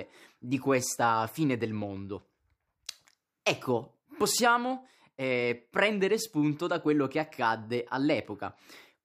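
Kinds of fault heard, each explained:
No audible faults detected.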